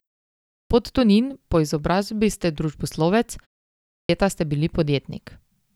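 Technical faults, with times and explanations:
0.41–0.70 s and 3.83–4.09 s, clipped start after a pause: the output device, idle during silences of 0.41 s and 0.45 s, wakes late, swallowing about 290 ms and 260 ms of speech onset.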